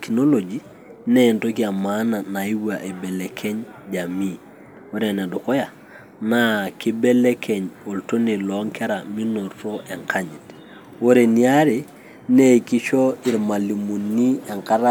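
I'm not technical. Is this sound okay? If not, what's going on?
Yes, this sound is okay, and there's nothing going on with it that needs fixing.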